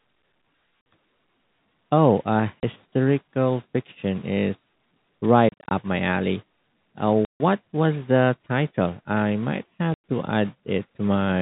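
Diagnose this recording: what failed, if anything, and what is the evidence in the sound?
The failure is in the network: packets were dropped and the receiver played silence in their place, so this is packet loss filled with silence. The speech cuts to dead silence, with hard edges, at 0.81 s (50 ms), 2.60 s (30 ms), 5.49 to 5.71 s (150 ms scattered in short runs), 7.25 s (150 ms) and 9.94 s (100 ms). Every gap is a multiple of 10 ms, which fits 10 ms packets. The narrowband G.711 telephone coding carries through the gaps.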